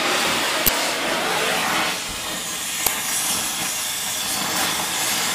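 A short burst of noise cuts into the audio from 0.67 to 0.69 s, lasting 20 ms, and a shorter click-like burst of 5 ms follows at 2.87 s. Both are an uninitialised buffer: a block of output was sent to playback before any audio had been written into it, so whatever values were left in that memory were played as if they were samples. Those values are unrelated to the surrounding audio, which is why each event breaks in abruptly.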